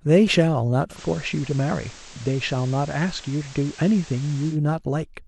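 At 0.90 s the speech blends from digital radio to analogue FM over about 0.1 s, staying there until 4.58 s: hiss rises to around 20 dB below the signal, and level drops about 1 dB.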